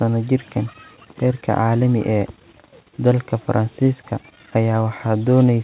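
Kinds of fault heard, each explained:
No fault can be heard anywhere in the clip. The speech has come through a narrowband call path, which fits G.711 A-law at 64 kbps, and nothing reaches above 4 kHz.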